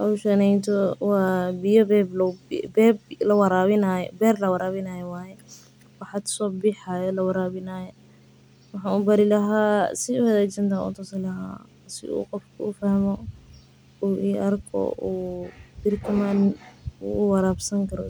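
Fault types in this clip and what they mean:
No technical faults can be heard anywhere in this speech recording, and the signal stays steady and continuous throughout.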